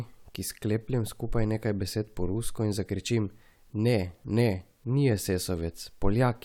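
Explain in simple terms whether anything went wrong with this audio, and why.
Nothing went wrong with this audio, because the speech has no fault that a listener can point to.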